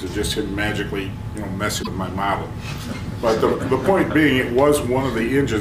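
At 1.79 s, a short run of the compressed stream carries damaged data: some of the bytes there no longer hold valid encoded audio, so the decoder misreads or rejects those frames, loses its place in the stream and has to hunt for the next good frame header before it can resume. The result is a brief glitch that breaks into the sound and lasts until about 1.87 s, when normal decoding picks up again.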